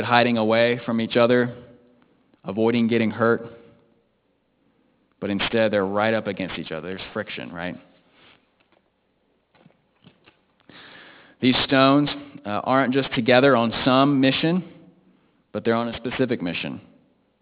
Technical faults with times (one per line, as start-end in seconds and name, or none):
0.00-17.42 aliasing